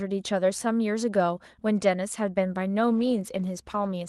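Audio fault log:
2.97–4.09 s, call bitrate drop: the sound turns coarse and rough until the end, which fits Opus falling from 32 to 18 kbps. There are no gaps, which sets it apart from packet loss.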